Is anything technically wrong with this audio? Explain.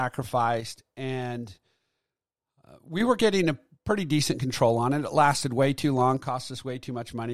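Yes. From 0.61 to 3.01 s, ending just before "were getting a pretty", and again from 6.17 s to the end, after "lasted way too long", one channel likely drops out. The mono sum loses half its input, so the speech abruptly falls by about 6 dB.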